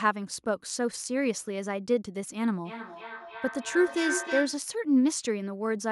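From 2.65 s to 4.69 s, a feedback howl builds up. The sound loops from loudspeaker back into microphone and gains level each trip. It narrows to a tone around 1.5 kHz, with repeats roughly every 300 ms, peaking about 5 dB below the speech.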